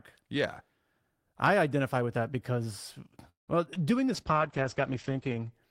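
A speech clip with three kinds of call fault, all in its second half. Right after "identify with that because", from 3.29 to 3.50 s, there is a call audio freeze: the last sound is stretched into a fading buzz or hiss that sinks into about 130 ms of silence before the talker resumes exactly where they left off. Nothing is lost; roughly 0.18 s of delay is inserted instead, most likely because packets stalled in transit and the jitter buffer ran dry. Shortly after, following "with that because well", come two short concealed packet losses, at 3.68 to 3.70 s and 3.74 to 3.77 s. Each drops about 20 ms of real audio. The first is patched with almost nothing and pulls the timing back by around 20 ms. The second is bridged with a brief extrapolated smear before blending back. Unlike the freeze, these remove sound rather than pausing it, and they last hundredths of a second rather than a fifth of one. 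From 4.15 to 5.58 s a call bitrate drop takes the encoder from 32 kbps down to 9 kbps, bottoming out for about 1.3 s. Bandwidth shrinks from 20 kHz to 8 kHz, so the speech turns muffled and rough. That sustained dullness over more than a second, with no gap or glitch, separates it from the brief loss artefacts.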